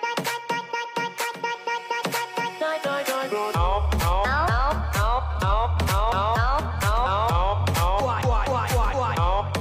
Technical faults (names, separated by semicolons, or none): none